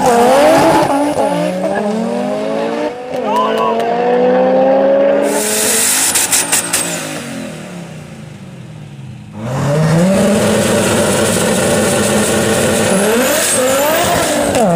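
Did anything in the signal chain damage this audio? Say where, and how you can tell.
No, nothing in the signal chain damaged this audio.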